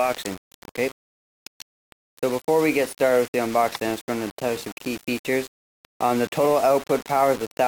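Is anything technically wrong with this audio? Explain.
Yes. Throughout the audio, a grainy, gritty distortion rides on the sound and changes character as the sound changes, roughly 20 dB below the signal. Quieter passages turn coarse or sputter, and the softest moments drop toward silence. This is likely low bit depth without dither: the signal appears to have been rounded to about 5 bits, so the rounding error tracks the waveform instead of forming a steady, neutral hiss.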